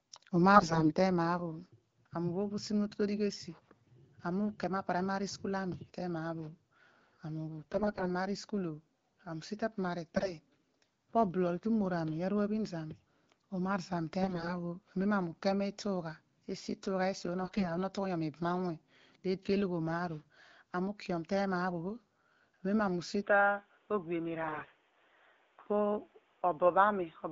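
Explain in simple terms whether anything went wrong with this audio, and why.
Two things went wrong. First, AMR bit errors: over a weak connection, some of the less protected data in the compressed speech arrived corrupted, so the decoder rebuilt the voice from wrong values. The speech keeps roughly its pitch and loudness but turns hoarse, scratchy and gargly at 0.55 to 0.89, 7.62 to 8.07, 10.12 to 10.32, 14.21 to 14.55, 17.41 to 17.66 and 24.43 to 24.74 seconds.

Second, from 23.22 seconds to the end, the recording likely switched its input to a poorer device. The sound becomes duller, with nothing above about 3.8 kHz, and a faint new background noise appears, though there is no gap and the loudness stays the same.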